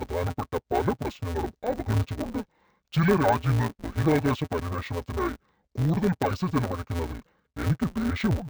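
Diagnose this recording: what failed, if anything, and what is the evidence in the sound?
Interleaved audio read as planar at the sample-format conversion stage, throughout the speech. About 5.8 ms blocks, fitting 256 samples, give a dull, robotic 172 Hz buzz without any octave drop.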